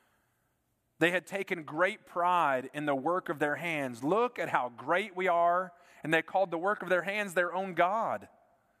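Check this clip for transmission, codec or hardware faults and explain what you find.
No faults found in this clip.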